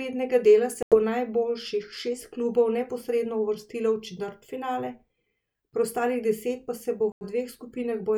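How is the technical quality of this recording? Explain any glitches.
The speech has two short gaps of silence. They are most likely Bluetooth dropouts. The first runs from 0.83 to 0.97 s, just before "najboljših šest klubov neposredno". The second runs from 7.12 to 7.25 s, right after "deset pa se bo". Audio packets reached the headphones too late and were discarded, so playback fell silent. Each hole has abrupt or briefly faded edges. About 90 ms of sound is missing each time, which fits several lost packets. The speech then resumes further on, as if it had kept playing.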